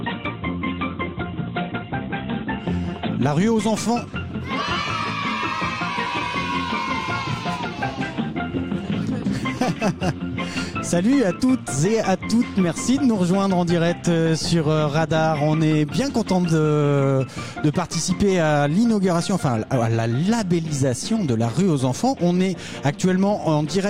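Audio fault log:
No faults detected anywhere in the clip.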